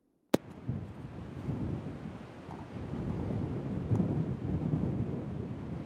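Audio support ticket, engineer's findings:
Findings: no audio fault found in this recording of sounds.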